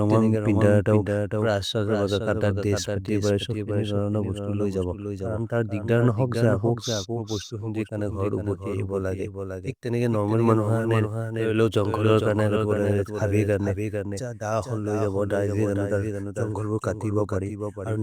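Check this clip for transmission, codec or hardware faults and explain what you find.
A doubled audio track runs through the whole clip. The speech was likely captured a second time by a slower path and mixed back in, so a full-band copy trails the original by about half a second at a level a few decibels lower. Because the copy carries no decay or room colouring, it sounds like a second, slightly quieter rendering of every syllable arriving late, a hard echo.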